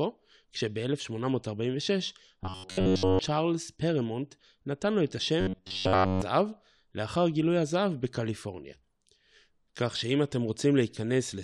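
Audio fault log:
2.43–3.19 s and 5.41–6.22 s, robotic sound from repeated short buffers: speech becomes a rigid metallic buzz fixed at 93.8 Hz, entirely in the first span and for most of the second. The likely cause is audio arriving late and a segment of roughly 10.7 ms being looped in its place, which imposes that pitch. A spectrogram shows evenly spaced horizontal harmonic lines at multiples of 93.8 Hz, and the waveform shows a short repeating cycle.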